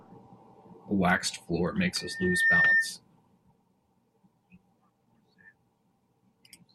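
A single piercing tone near 1.8 kHz rises out of the speech at 1.94 s, just after "waxed floor". It swells over about half a second into a squeal that sits roughly 10 dB above the voice and cuts off at 2.94 s. This is loudspeaker feedback squeal. The microphone was picking up the loudspeaker it fed, and at 1.8 kHz the loop gain went above one, so that frequency kept reinforcing itself.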